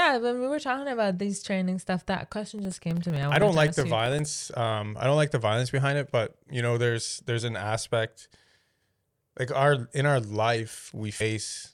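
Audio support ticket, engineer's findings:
Regular ticking from 2.46 to 4.32 s, just after "these training stuff that": about 30 small ticks spaced 64 ms apart, heard only under signal. Probable component: periodic USB or driver dropouts. A background task stalls the bus or driver at a fixed interval, and roughly 1 ms of audio is replaced with silence each time.

Brief smeared blip at 11.2 s rather than a hard click, with the sound jumping forward by roughly 150 ms. Probable component: compressed frames skipped in the decoder or file. About five 26.1 ms frames are missing, which fits MP3-style 1152-sample frames at 44.1 kHz. The overlap between neighbouring frames blurs the join.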